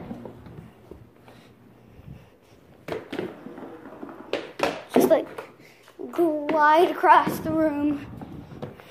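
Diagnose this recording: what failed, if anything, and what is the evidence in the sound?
Nothing in the recording points to a failure at any stage of the chain. No stage between capture and playback leaves evidence of a fault in the sound.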